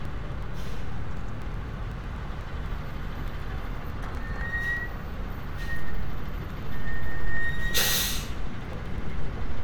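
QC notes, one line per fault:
0.05–9.48 s, periodic USB or driver dropouts: a steady train of ticks every 0.124 s, roughly eight per second, about seventy in all. Each time, something around a millisecond of the sound is skipped outright, not filled with silence, so the waveform jumps and clicks. The spacing is regular and the ticks disappear whenever the sound itself goes quiet, which separates this from random packet loss or clipping crackle.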